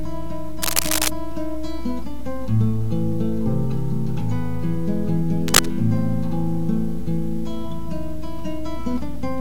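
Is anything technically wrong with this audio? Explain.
Yes. Cable scratch noise occurs twice, from 0.62 to 1.08 s and from 5.48 to 5.66 s. A worn cable or connector carrying DC was likely moved, its contact resistance jumping about and injecting dense, uneven noise bursts. It is heard as scratching, roughly level with the audio first, then somewhat louder.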